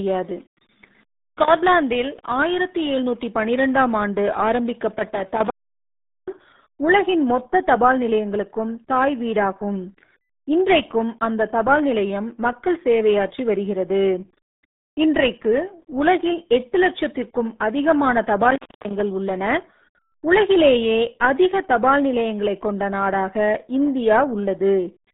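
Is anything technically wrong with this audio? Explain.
Yes. Throughout the whole clip the speech carries the RealAudio 14.4 codec's signature: a low-rate speech coder, at 8 kbit/s, squeezing the band to roughly 150 Hz–3.7 kHz with nothing above 3.8 kHz. Heavy coding damage leaves the speech muffled, gargly and boxy.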